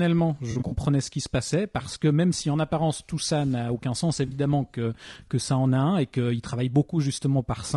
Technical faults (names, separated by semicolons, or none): low-delay AAC compression; AAC frame loss with concealment